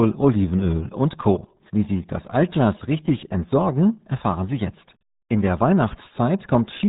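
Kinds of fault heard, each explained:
RealAudio 14.4 codec: the dial-up era RealAudio 1 speech codec, squeezing everything down to a trickle, and the damage here is heavy. The whole clip is cut off hard above about 3.8 kHz, so the speech sounds boxed-in and muffled with no air or crisp consonants. On top of that there's a gargly, watery texture running through every phrase, the kind of smearing you'd expect at roughly 8 kbit/s.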